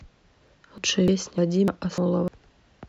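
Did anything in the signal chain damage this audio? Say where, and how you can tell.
Yes: audio missing between chunks at 0.48, 0.78, 1.08, 1.38, 1.68, 1.98 and 2.28 s. Each skip is about a fifth of a second, likely lost at a buffer stage between 0.5 s chunks. The waveform shows abrupt gapless splices, and the spectrogram shows vertical seams.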